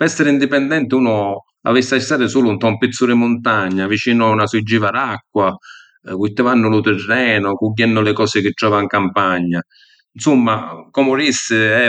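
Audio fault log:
No faults detected in this speech.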